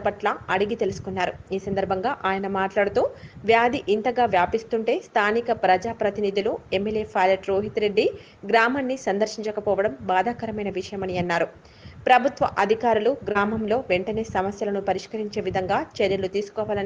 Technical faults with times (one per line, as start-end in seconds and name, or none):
13.31-13.38 short concealed packet loss